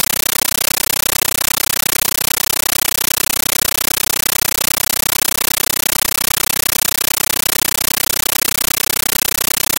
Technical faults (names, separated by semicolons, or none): compressed stream played as audio